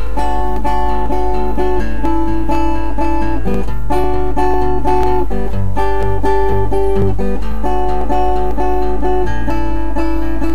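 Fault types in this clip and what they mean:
Hard clipping: from 4.39 to 5.19 s the level exceeds the stage's ceiling by about 2 dB, so peaks are cut flat, adding brief crackle on the loudest moments.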